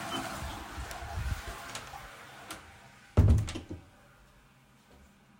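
Listening closely to this recording of sounds, nothing stood out as a technical problem.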